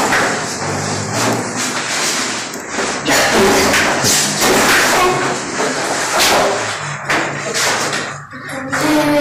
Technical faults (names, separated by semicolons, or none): hard clipping